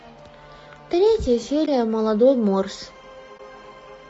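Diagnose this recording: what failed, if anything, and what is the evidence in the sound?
Throughout the speech the voice sounds rough and grainy, with noise filling the gaps between harmonics and a thin, synthetic-sounding top band. This is a codec-stage problem, likely low-delay AAC compression (AAC-ELD) at a low bitrate, consistent with around 32 kbps, whose short frames resolve pitch harmonics poorly.

Two brief dips open at 1.66 to 1.68 s and 3.37 to 3.40 s, fading out and back in. This is AAC frame loss with muting at the network or decoder stage: each gap fits one lost 20 ms frame whose spectrum the decoder zeroed, with overlapping windows smoothing the edges.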